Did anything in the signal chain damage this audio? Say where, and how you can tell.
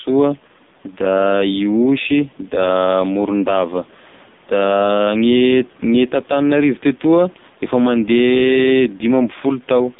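Yes, at the codec stage: AMR narrowband mobile codec damage runs through the whole clip. Nothing passes above 3.7 kHz, the band sits at 150 Hz to 3.7 kHz, and the speech turns buzzy and synthetic, consistent with roughly 5.15 kbps. The faint room noise, about 32 dB down, warbles.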